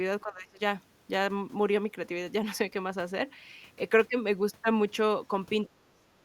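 From 0.23 to 0.6 s and again from 5.68 to 6.03 s, the speech dips sharply, by about 20 dB and then about 35 dB. This is speech suppressed in double talk, likely an echo canceller mistaking the talker for far-end echo during overlap.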